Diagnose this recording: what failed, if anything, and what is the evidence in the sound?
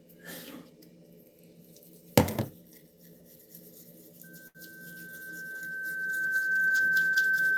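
Loudspeaker feedback squeal. The stage is acoustic, in the playback path. A microphone is hearing the loudspeaker it feeds. From 4.23 s a steady tone near 1.6 kHz appears. It swells over roughly two seconds and settles at about 15 dB above the rest of the sound. It continues to the end of the clip. At that one frequency the loop gain passed unity, so the tone kept feeding itself. Nobody broke the loop before the recording stopped.

Short stall from a late packet. The stage is the network, at the receiver's jitter buffer. At 4.47 s the sound hangs for a moment and picks up again at 4.58 s. The held stretch lasts 74 ms, and nothing after it is skipped. A packet arrived late, and the buffer ran dry. The receiver extended the last sound until the packet came, then resumed where it left off. Everything after that point plays 74 ms later.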